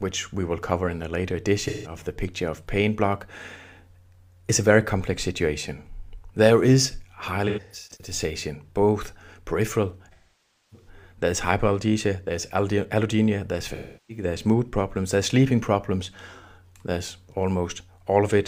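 AAC frame loss with concealment hits at 1.67, 7.48, 10.13 and 13.75 s. The decoder patches missing frames from the last good spectrum, so each gap of about 0.17 to 0.6 s turns into a smeared, noisy or phasey patch. At 7.48 s the loss comes as scattered short dropouts.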